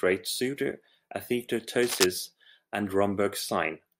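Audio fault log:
1.83–2.04 s, cable scratch noise: a dense, uneven burst of scratching, about as loud as the speech, over roughly a fifth of a second, likely from a worn connector shifting its contact resistance; unlike isolated clicks or crackle, the bursts crowd together into a rustle.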